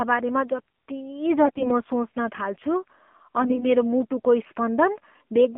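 Throughout, the speech carries the AMR narrowband mobile codec: a phone-line band of about 200 Hz to 3.4 kHz, with nothing above it, and a buzzy, synthetic quality that fits a low mode near 7.4 kbps. A spectrogram shows an empty region above 3.4 kHz and smeared harmonics.

AMR bit errors appear from 1.46 to 1.71 s, at around ten percent, and more mildly from 3.42 to 3.65 s. Flipped codec bits misplace the excitation pulses, so pitch and level hold but the speech turns scratchy and gargly. On a spectrogram these stretches show ragged, broken harmonics, and the waveform looks jagged.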